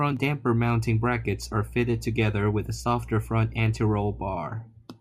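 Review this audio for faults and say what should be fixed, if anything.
A steady low 60 Hz drone sits under the speech from 0.54 to 4.39 s, fairly prominent. This is mains hum, power-line current leaking in through a ground loop or transformer. To prevent it, break the ground loop with a common earth point or isolation transformer, and keep cables away from power supplies.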